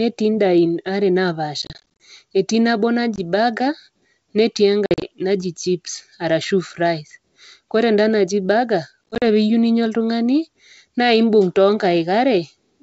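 Packet loss on an ADPCM call breaks the speech four times. From 1.62 to 2.02 s, about 180 ms drops out in hard-edged gaps spread over 380 ms (longest 30 ms) before "etii nabo". About 20 ms is lost at 3.16 s. From 4.86 to 5.05 s, 110 ms goes over 160 ms (longest 50 ms) ahead of "naji chips arashu fries". Between "enda naji burger" and "pee iyou ninya oltung'ani", 9.10 to 9.23 s loses 90 ms (longest 40 ms). Each silent gap puts the decoder's predictor and step size out of step with the sender's, so the speech resumes slightly distorted, at times with a click or at the wrong level. The wideband G.722 coding underneath carries clear, extended-bandwidth speech.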